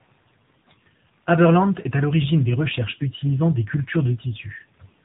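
Tandem speech coding runs through the whole clip. The call crossed links with different coders, so it was decoded and re-encoded at each border, most likely passing through a CVSD link and a G.711 A-law stage before a final AMR-NB coder at what sounds like about 7.95 kbit/s. Each stage worked on the previous stage's damaged output, so the errors stack up. The speech sounds rough, muffled and warbly, with nothing above 3.8 kHz.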